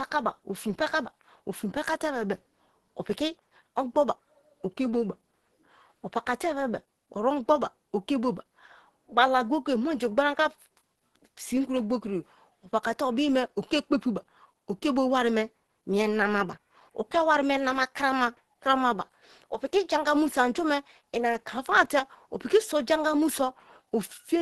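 Speech, carrying audible Opus compression for its whole length: the sound is muffled and hoarse, with a hard ceiling near 12.1 kHz. This is likely the codec's hybrid speech mode at a low rate, which fits roughly 16 kbps.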